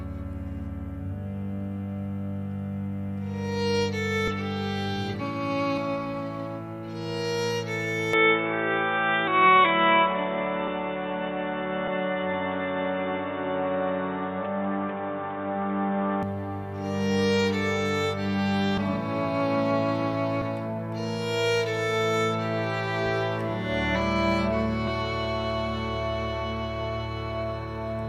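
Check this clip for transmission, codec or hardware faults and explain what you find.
Two faults are audible: repeated jumps where stretches of audio go missing, and an eight-second stretch where the sound turns dull and noisy before clearing again.

Compressed frames skipped, at 4.27, 5.77, 9.27, 11.87, 18.77, 20.41 and 24.87 s. At each point the audio leaps forward. The gaps range from about a tenth of a second to roughly half a second, the longest being at 5.77 s. Whole blocks of compressed data never reached the output, and the jump sizes fit 20 ms codec frames.

Input switched to a poorer device, from 8.13 to 16.23 s. The sound abruptly goes boxy and muffled, with nothing above 3.8 kHz, a new background hiss roughly 30 dB below the signal, and a level shift of around 5 dB. There is no silent gap at the changeover. The likely cause is the recording moving to a narrower-band microphone or headset call profile and then back to the original input.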